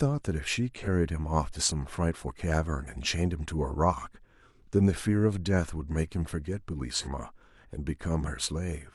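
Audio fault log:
0.76–0.87 s and 6.95–7.08 s, AAC frame loss with concealment: about 43 ms each, one lost frame refilled from the prior spectrum, so the speech smears briefly; spectrogram shows blurred harmonics, waveform a dulled envelope.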